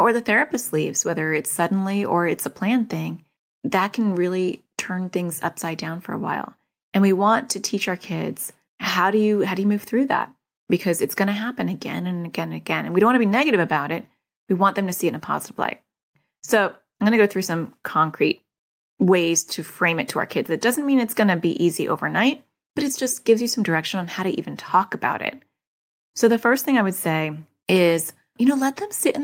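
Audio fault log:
No audible faults detected.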